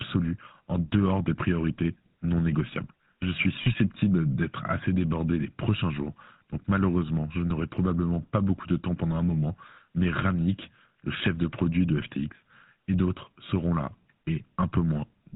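Speech coded with the GSM full-rate codec throughout, with its buzzy, gravelly texture and nothing above 4 kHz, which fits 13 kbps GSM; that grit, not mere band-limiting, marks it. Lost GSM frames at 3.62–3.67 s and 11.18–11.22 s are bridged by the previous sound repeating as a brief metallic ring, not a silent gap.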